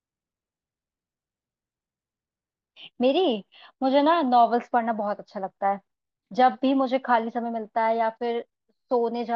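No technical faults can be heard anywhere in this recording.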